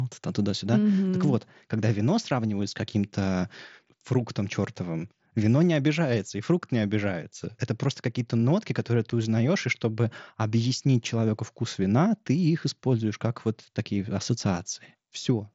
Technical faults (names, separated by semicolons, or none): unconcealed Bluetooth headset packet loss